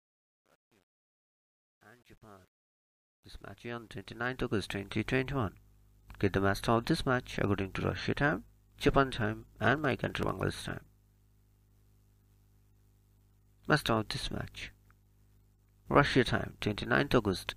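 The fade-in from 0.0 to 5.07 s shows truncation distortion: with no dither and a word length of about 10 bits, the quietest part up to 4.07 s turns gritty, drawn as stair-stepped blocks on the waveform. From 9.40 to 11.88 s, periodic USB or driver dropouts skip roughly half a millisecond of audio every 63.5 ms, about forty times, producing even ticks that appear as regularly spaced vertical lines on a spectrogram.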